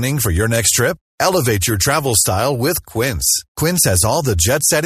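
Nothing in this recording stands out as a technical fault; it just runs along as ordinary speech with no glitches to point to.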